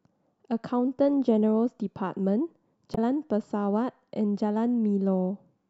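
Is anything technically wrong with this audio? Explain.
Yes. From 2.91 to 2.98 s, a stretch of about 70 ms, the speech is broken by damaged data in the compressed stream. Some of the encoded bytes there were corrupted, so the decoder could not read those frames correctly, lost its place in the bitstream and had to hunt for the next valid frame header before resuming. What comes out in that gap is a brief chirp, squawk, click or short hole in place of the speech.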